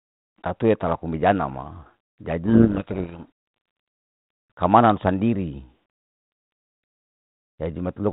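From 2.45 s to 3.26 s the speech is buried in harsh distortion, a codec payload misread in which the G.726 code words arrive with their bit order reversed. The decoder accepts them as valid but applies wrong steps to its prediction, until both ends agree again. The band-limited telephone sound around it fits 32 kbit/s G.726.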